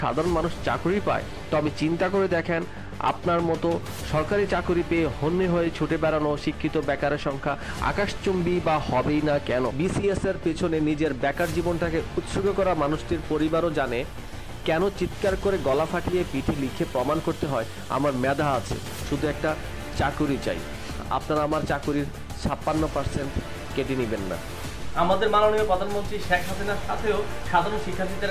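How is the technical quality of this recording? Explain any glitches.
No glitches or technical faults can be heard here.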